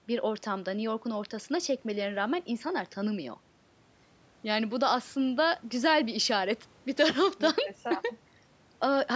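Nothing stood out on listening to this speech recording, which has been through a call's microphone processing that trims the lowest bass and leaves nothing above 8 kHz.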